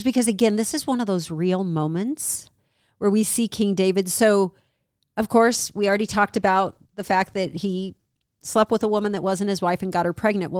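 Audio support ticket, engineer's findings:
Call bitrate drop, 5.46 s to 9.39 s. Speech turns rough and watery, top end dulled. Probable component: Opus encoder following a falling bandwidth estimate, rate cut from 40 to 15 kbps and held near the floor about 3.9 s. Coarser quantisation plus high-band cutoff at the reduced rate. Recovers by 9.39 s.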